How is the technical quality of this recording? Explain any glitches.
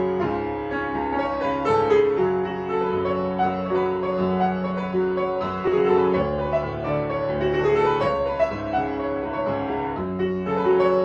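One glitch stands out: compressed frames skipped at 5.67 s. About one frame of the encoded stream never reaches the output, whether missing from the file or rejected by the decoder as damaged, so playback jumps ahead by roughly 20 ms, which fits a 20 ms frame. The overlapping frames on either side blend across the gap, so instead of a sharp click you hear a short smeared blip. On a spectrogram this appears as a thin vertical seam where the texture shifts abruptly. In the waveform, the envelope jumps with no clean discontinuity spike.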